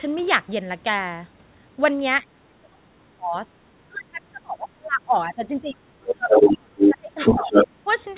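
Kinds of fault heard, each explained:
Speech suppressed in double talk: The talker's level falls sharply from 2.23 to 3.51 s and again from 3.88 to 7.56 s. The deepest drops reach about 30 dB, and roughly four seconds of speech are pulled down in pieces. A shorter dip of about 10 dB follows at 7.84 to 7.88 s. The likely cause is an echo canceller that heard both sides at once and turned everything down.
Other side's voice leaking through: A second voice breaks in four scraps, at 6.07 to 6.14 s, 6.31 to 6.57 s, 6.78 to 6.94 s and 7.18 to 7.68 s. The first scrap is about 5 dB below the talker. The rest sit about 5 dB above. All of it is capped at 4 kHz like the rest of the call audio. This is likely loudspeaker sound that the echo canceller failed to strip from the microphone.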